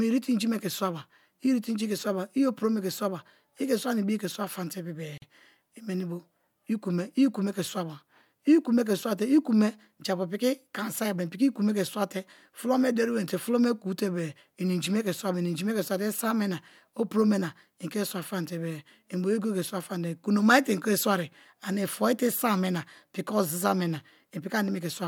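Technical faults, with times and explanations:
5.18–5.22 s, gap at a join of encoded pieces: the speech was encoded as separate pieces and spliced without trimming the encoder's start-up delay or the padding on the last frame, so that leftover silence stays at the seam. It opens as a 43 ms hole in otherwise continuous speech, with edges smeared by the codec, and the speech then resumes exactly where it stopped, with nothing missing.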